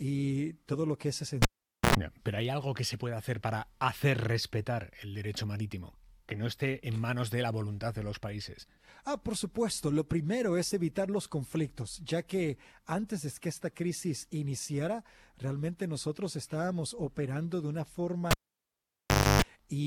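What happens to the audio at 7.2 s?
Nothing goes wrong at 7.2 s; the audio at that moment is intact, with no dropout, click or distortion.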